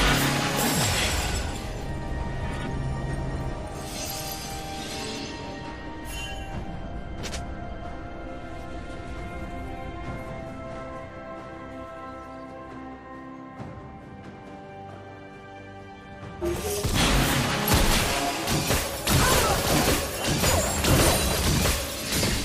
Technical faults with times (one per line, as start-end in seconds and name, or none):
5.09-5.27 compressed frames skipped